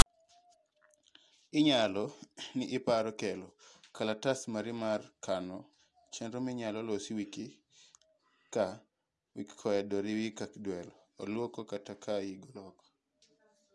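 At the very start, from 0.00 to 0.06 s, the file tags are played as audio: a block of metadata text, followed by zero padding, has been decoded as if it were speech samples. The text bytes come out as a harsh, loud rasp that sits off-centre, then the padding drops to dead silence before the speech begins. On the waveform this is a dense, lopsided block with a DC offset and abrupt edges. On the spectrogram it is a short broadband smear, then a blank gap.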